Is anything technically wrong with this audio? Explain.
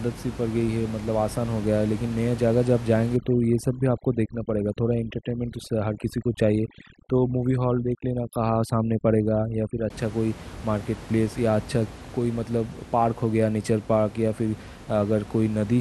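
Yes. From 3.16 s to 9.90 s the speech suffers from overdone noise removal. A noise reduction stage set far too aggressively is cutting individual frequency bands down or out whenever their level sits close to its noise estimate, and the quieter components of the speech fall below that threshold too. The room noise, normally about 16 dB under the speech, drops and breaks up into twinkling, warbling artefacts.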